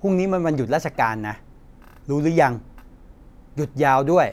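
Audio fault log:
No faults heard anywhere in this speech recording.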